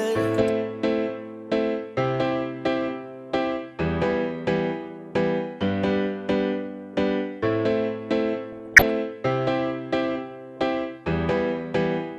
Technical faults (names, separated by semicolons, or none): DAB burbling